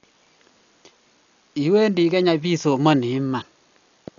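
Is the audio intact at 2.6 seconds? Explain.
No. Heavy damage consistent with Dolby Digital compression runs through the whole clip, including 2.6 s. Nothing remains above 6.9 kHz, and the speech sounds dull with rough, fluttering noise, likely from band-narrowing and dither-filled empty frequency lines at a rate that fits about 48 kbps.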